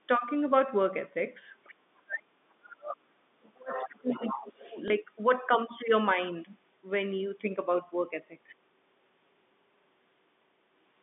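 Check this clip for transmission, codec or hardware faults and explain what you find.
Three kinds of fault are audible in this speech clip: the far end leaking back in, the near talker being pushed down while both sides speak, and one brief packet-loss blip. All of it is heard over a G.711 telephone band of roughly 150 Hz to 3.6 kHz.

Other side's voice leaking through appears at 1.64 to 1.71 s, 3.75 to 3.86 s and 4.08 to 4.77 s. A second voice comes through in scraps, faint at first (about 30 dB down) and then much stronger, about 10 to 15 dB below the talker. This is likely residual loudspeaker echo the canceller failed to remove.

Speech suppressed in double talk affects 1.72 to 1.82 s, 1.98 to 3.07 s and 3.39 to 4.66 s. The talker's level dips by about 25 dB, then drops sharply by about 40 and 35 dB in the longer stretches. The likely cause is the echo canceller attenuating everything when it could not tell near speech from echo.

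Packet loss with last packet repeated occurs at 4.88 to 4.90 s. A 20 ms gap, which fits one lost packet, was filled by replaying the previous packet, so a small blip is heard.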